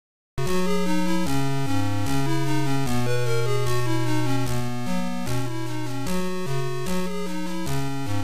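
The first 0.38 s is digital silence, and at 0.38 s the audio begins abruptly in the middle of a sound: a cut-off start. Capture or streaming evidently started late, so the opening of the sound was never recorded. There is no natural attack and no fade-in. The signal jumps from silence straight to its running level, which makes the start sound clipped and truncated.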